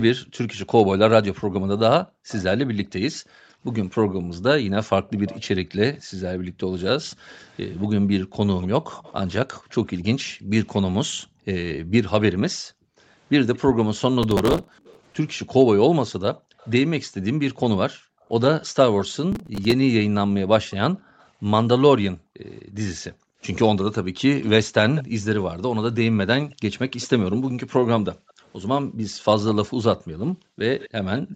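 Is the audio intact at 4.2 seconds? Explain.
No. From 0.15 to 6.61 s the background is gated by the echo canceller: it pulled the microphone down hard while the loudspeaker played, so room sound dips by up to about 40 dB for about a second and a half in total. On a waveform and spectrogram these dips appear as sudden near-silent gaps in the noise floor.

An echo leak also runs from 2.28 to 16.71 s. A faint copy of the sound, roughly 25 dB down, trails the original by 218 ms, likely because the echo canceller let some loudspeaker pickup through. On a spectrogram it shows as weak, delayed repeats of the speech.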